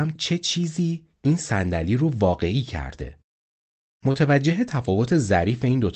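At about 4.11 s, running to 4.16 s, there's a short concealed packet loss in the speech. Roughly 20 ms of the call never made it to the decoder in time, so the receiver patched the gap by stretching out what came just before and then easing back into the real signal. You hear it as a quick little smear or wobble, sitting inside audio that's band-limited to around 8 kHz by the Opus call path.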